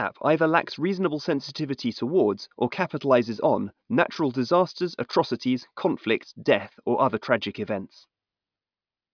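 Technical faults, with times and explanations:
No technical faults are audible anywhere in the speech recording.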